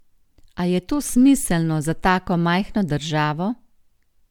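The speech has likely been through several rounds of lossy encoding and decoding, with the character pointing to MP3 at around 128 kbit/s. This is generation loss, where each pass requantises on a shifted frame grid. Throughout, it sounds swirly and hollow, with smeared, blurred consonant attacks.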